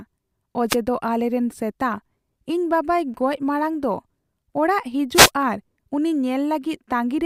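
From 0.68 to 0.76 s, a wireless microphone noise hit sounds as a brief burst of static before "ᱟᱞᱮᱨᱮᱱ ᱥᱮᱛᱟ". The radio link faded as reflections cancelled, so receiver noise rose over the speech. A second hit, from 5.14 to 5.30 s, is longer and swishes just before "ᱟᱨ ᱩᱱᱤ".

At 3.14 s, a block of digital silence lasting about 5 ms is heard as a tick or dip before "ᱜᱚᱡ ᱢᱟᱲᱟᱝ ᱫᱚ". The audio drops straight to silence and back, with no fade. Its length fits a 256-sample buffer that was not filled in time.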